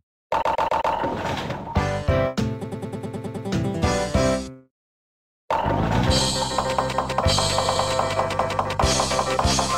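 From 0.41 to 0.93 s, repeated frames: a 131 ms block plays four extra times. The decoder is fed the same compressed run again. It sounds like a stutter. From 2.63 to 3.46 s, a 105 ms block repeats eight more times.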